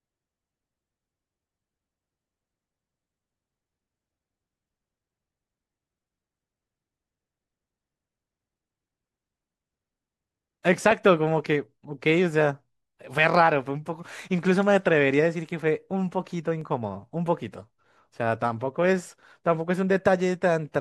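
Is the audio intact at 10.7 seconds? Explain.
No. At 10.74 s the speech carries a single sharp click, a brief tick that shows as a thin vertical line running through the whole spectrum. The likely cause is dropped samples: a fraction of a millisecond of the stream goes missing, so the waveform leaps straight from one value to a later one. That gap is far too short to remove any sound, but the sudden step in the waveform produces the click.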